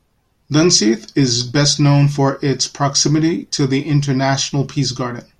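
A speech recording with no technical faults to report. Nothing in it calls for a time or a cause.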